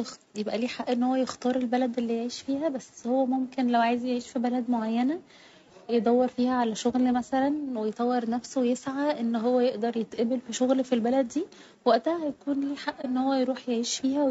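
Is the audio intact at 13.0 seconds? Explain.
No. Right after "هيكون ليه حق", from 13.01 to 13.05 s, there's AAC frame loss with muting. The decoder zeroed the missing spectrum, and the overlapping windows fade the sound down and back up, leaving a brief dip that fits one lost frame of about 30 ms.

The speech there also sounds rough and grainy, with noise filling the gaps between harmonics and a thin, synthetic top end. That's likely low-delay AAC compression, AAC-ELD, and the damage is plainly audible, which fits a low bitrate around 32 kbps.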